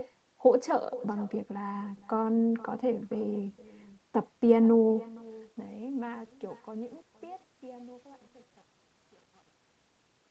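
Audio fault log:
throughout, echo with no canceller: a faint, thin copy of the speech trails about half a second behind, roughly 22 dB down, as a loudspeaker's output leaks back uncancelled.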